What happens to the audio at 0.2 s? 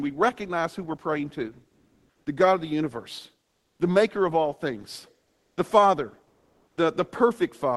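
Nothing goes wrong at 0.2 s: the speech passes through the call path intact, with no dropout, glitch or distortion at that moment.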